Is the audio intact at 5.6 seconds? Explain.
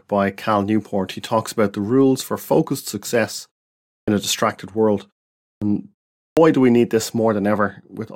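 No. A clipped start after a pause runs from 5.57 to 5.62 s. During the preceding 0.54 s of silence the output device went idle and took 46 ms to wake, so the speech resuming there bursts in abruptly, its opening sounds missing.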